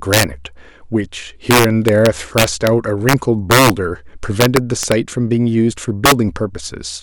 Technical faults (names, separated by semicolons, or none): integer overflow